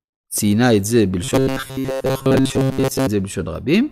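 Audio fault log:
1.24–3.07 s, robotic sound from repeated short buffers: speech becomes a rigid metallic buzz fixed at 133 Hz, loosely following the words, likely from looping a block of about 7.5 ms over late audio. Unlike dropouts, there are no gaps.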